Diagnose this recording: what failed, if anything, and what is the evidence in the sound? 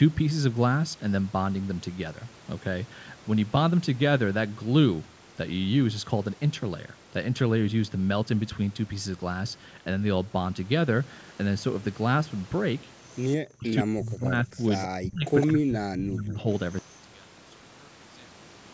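The speech gets pushed down hard in four bursts: 13.47 to 13.68 s, 13.84 to 14.59 s, 15.02 to 15.27 s and 15.47 to 16.47 s, dropping by up to about 40 dB. That's call processing, likely speech suppressed in double talk. The echo canceller couldn't tell the talker from the far end and ducked everything.

There are two short scraps of a delayed copy, at 14.75 to 14.87 s and 15.40 to 15.47 s. They trail the voice by 158 ms and sit about 20 dB and then about 10 dB under it. This is likely an echo leak: loudspeaker sound the far-end canceller didn't fully remove got sent back.

From 16.79 s to the end, the level collapses by about 32 dB, leaving only a faint residue of the speech. The likely cause is one channel inverted somewhere in the wiring or playback path, so the shared centre content cancels when the two channels are summed to mono.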